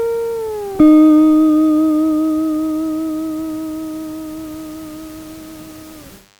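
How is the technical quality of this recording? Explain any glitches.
The recording has one fault near the end. From 4.51 s to the end, a DECT cordless phone buzz appears. A nearby DECT phone or base sends radio bursts every 10 ms, and the audio circuit rectifies them. The result is a thin, steady 100 Hz buzz with many harmonics, about 35 dB below the main sound.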